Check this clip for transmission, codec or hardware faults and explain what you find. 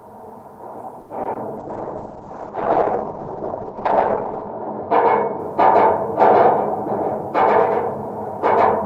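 Three kinds of network and codec fault occur, all early in the clip: a late-packet stall, two short concealed packet losses, and a bitrate drop lasting several seconds.

At 1.01 to 1.11 s there is a short stall from a late packet. A packet arrived after it was due, the jitter buffer emptied, and the receiver held the last sound for about 80 ms until the packet came in. Nothing is lost, but playback resumes 80 ms later than before. You hear one sound drawn out unnaturally. On a spectrogram the frequency pattern freezes into flat horizontal bands; the waveform shows a repeating, looped-looking stretch.

At 1.23 to 1.27 s and again at 1.33 to 1.37 s there is short concealed packet loss. Each time, 20 ms of audio never reached the decoder, and the receiver invented a replacement by extending the preceding sound, then crossfaded back into real audio. These are brief smears about a tenth of a second apart. 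A spectrogram shows two thin patches where detail blurs or turns noisy. The waveform looks smoothed there, without its true transients.

From 1.58 to 5.45 s there is a call bitrate drop. The bandwidth estimate fell and the Opus encoder went from 32 to 8 kbps, staying at the lowest rate for about 2.9 s. At that rate it also narrows the audio band from 20 kHz to 8 kHz, so the sound turns muffled and coarse, with watery artefacts, before clearing by 5.45 s. On a spectrogram the energy above 8 kHz disappears abruptly, leaving a flat ceiling across that span, and the remaining content looks blotchy. The waveform's envelope changes little.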